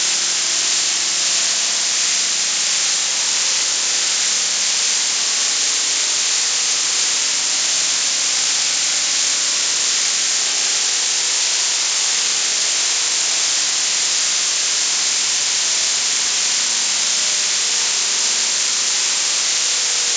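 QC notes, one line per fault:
No faults found on listening; nothing to log.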